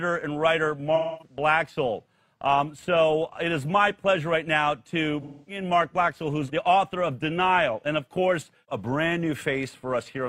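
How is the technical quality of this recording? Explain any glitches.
The recording has two audible glitches, both AAC frame loss with concealment. From 0.95 to 1.36 s and again from 5.21 to 5.62 s, the decoder is missing about 256 ms of data, which fits a run of six lost frames. It fills the gap from the last good spectrum, so the sound turns smeared and noisy. On a spectrogram each patch looks like a blurred, uniform smear, and the waveform loses its normal detail there.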